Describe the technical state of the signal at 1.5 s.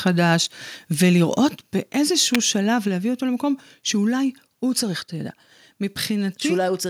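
A microphone volume stepped down occurs at 1.47 s: the speech and the background beneath it drop together by about 4 dB in a single step and stay lower. The likely cause is call software reducing the microphone's input volume after judging it too hot.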